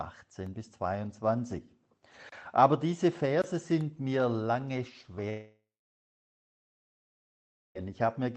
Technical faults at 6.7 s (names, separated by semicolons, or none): long network dropout